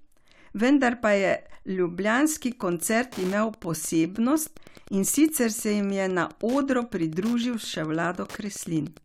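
From 2.42 s to the end, Wi-Fi interference adds a steady ticking at the 102.4 ms beacon rate, roughly 25 dB below the speech. Its even ten-per-second rhythm separates it from random crackle. At 4.17 s, a gap between stream segments inserts a hard-edged 3.3 ms hole of silence, fitting a boundary between six-second segments. Unlike a dropout, nothing is lost; the sound resumes exactly where it stopped.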